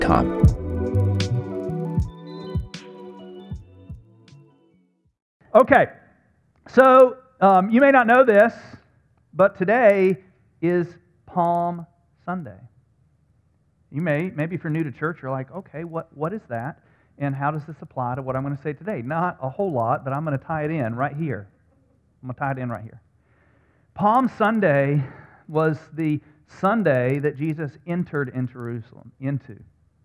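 A steady train of faint ticks, 20 per second, runs under the audio for its whole length and sounds when signal is present. It comes from a resampler restarted on every block: each 50 ms block was converted from 48 kHz to 24 kHz in isolation, leaving a small error at every block edge.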